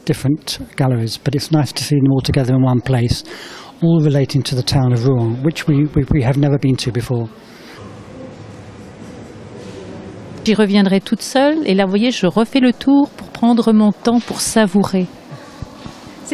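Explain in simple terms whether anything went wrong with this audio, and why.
No, nothing went wrong.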